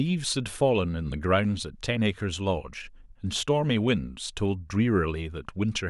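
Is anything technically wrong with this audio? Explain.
No, nothing in this speech recording stood out as a technical problem on listening.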